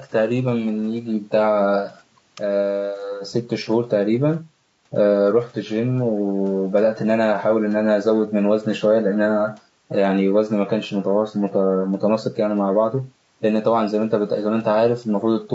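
Low-delay AAC compression runs through the whole speech clip, and its damage is plainly audible. The voice sounds rough and grainy, with noise filling the gaps between harmonics and a dulled, synthetic top band. This is likely the low-delay AAC-ELD used for calls: its short frames of about 500 frequency lines cannot separate closely spaced pitch harmonics well and spend bits inefficiently, and the degree of roughness fits a bitrate around 32 kbps.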